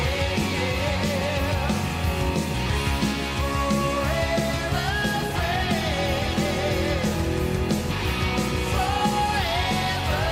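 No technical faults can be heard anywhere in the clip.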